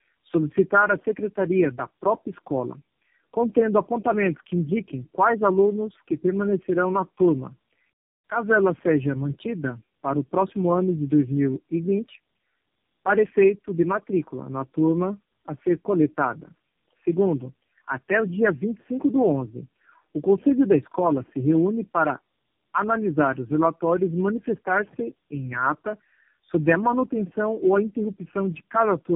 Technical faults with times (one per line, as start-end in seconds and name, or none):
0.00-29.16 tandem speech coding